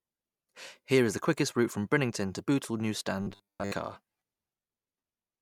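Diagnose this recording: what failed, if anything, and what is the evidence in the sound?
From 3.22 to 3.73 s, robotic sound from repeated short buffers, likely a driver underrun looping 10 ms slices, forces a metallic 100 Hz buzz, showing as rigid, evenly spaced spectrogram stripes.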